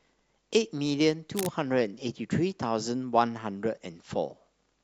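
From 1.36 to 1.53 s, a burst of cable scratch noise sits over the speech. It sounds like a short, ragged rustle, roughly 10 dB below the speech. The likely cause is a worn cable or connector being moved, with contact resistance fluctuating.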